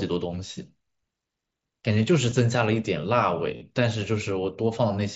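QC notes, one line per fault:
0.48 s and 2.30 s, concealed Bluetooth headset packet loss. Two brief dropouts of about 15 ms each. The receiver bridged each gap by repeating the closest-matching recent waveform.
3.57 to 3.61 s, concealed Bluetooth headset packet loss. A longer gap of about 45 ms. Repeating waveform fills it and sounds like a brief buzzy tone held at level. It ends in a slight warble.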